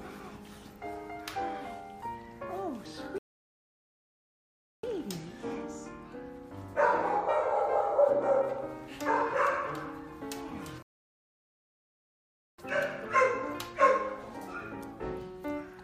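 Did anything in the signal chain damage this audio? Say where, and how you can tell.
Yes, at the playback stage. The sound drops to silence from 3.18 to 4.84 s and again from 10.82 to 12.58 s, then picks up exactly where it stopped, with nothing skipped. Each gap adds time, about 1.65 s and 1.76 s. These are rebuffering stalls: the player used up its downloaded audio, halted output until more data arrived over the network, and resumed from the same point, which stretches the clip's length.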